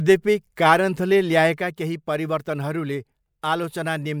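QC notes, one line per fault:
1.58 s to the end, sudden gain jump: speech and background noise drop together by about 6 dB in a single step, with no fade between levels. The likely cause is a gain setting or bit shift applied instantly instead of being ramped in.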